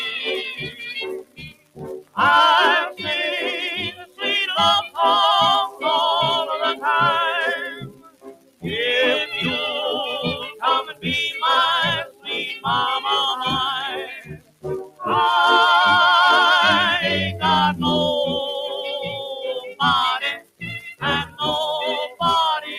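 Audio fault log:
Throughout: noise suppressor applied to music or sounds. A speech-tuned suppressor keeps treating steady material and decays as noise, so level swings by about 10 dB and the sound pumps and thins. A spectrogram shows sustained bands fading between attacks; the waveform envelope breathes.
0.61–5.83 s, 6.75–8.65 s, 10.51–11.05 s, 12.04–12.65 s, 13.95–15.06 s, 18.66–22.72 s: sound cut by the noise suppressor. Held or fading sound sinks by up to about 20 dB, for roughly two seconds in the first span and about 0.3 to 1.5 seconds elsewhere, while sharp onsets survive. The spectrogram shows darkened holes and tails clipped short, and the waveform shows sudden dips.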